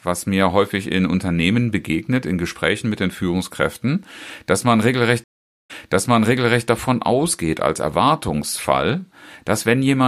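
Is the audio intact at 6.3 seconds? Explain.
No. At 6.3 seconds the speech is inside a stream reconnect, running from 5.24 to 6.67 s. The connection dropped and about 0.44 s of silence follows. A fresh decoder then restarts mid-stream. The speech resumes about 0.99 s earlier, so a stretch repeats, faded in at first.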